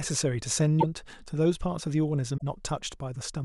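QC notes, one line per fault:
0.80–0.84 s and 2.37–2.42 s, broken MP3 bit reservoir. The speech jumps forward, and a short glitch follows each jump, lasting about 44 ms and 53 ms, roughly two frames of 26.1 ms. The likely cause is missing frames. The frame after each gap reaches back into earlier frames for its stored data and decodes the wrong bytes. Decoding recovers once the frames are complete again.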